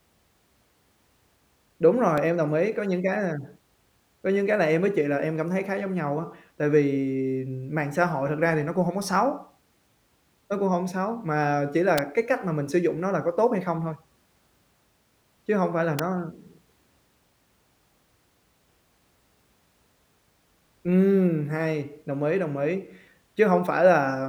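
Three sharp snaps cut across the speech: at 2.18 s just before "em đồng ý", at 11.98 s between "hổng xấu mà chỉ" and "cái cách mà mình" (the loudest, peaking around -5 dBFS), and at 15.99 s after "hông phải là". Each is an electrical switching spike, likely a nearby switch arcing into the audio line.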